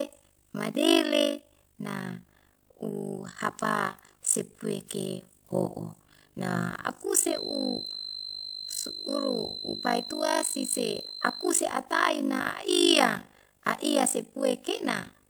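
From the start to the end of the speech, the level is modulated by overlap-add ripple. The audio was split into windowed frames and rebuilt with an overlap whose window gains do not add to a constant, so the level dips once per frame, around 50 times a second. The dips are deep, about 60 dB, nearly gating the signal each frame. The result is a hard, buzzing flutter that gives the speech a robotic tremolo.

From 7.22 s to 11.57 s a feedback whistle sits behind the speech, a steady tone at 4.1 kHz roughly ten decibels below the speech level. It is likely a loudspeaker-to-microphone loop held just short of instability, so one frequency keeps ringing without building up. It sounds like a thin, high whistle that swells and fades slowly in level and stops at 11.57 s.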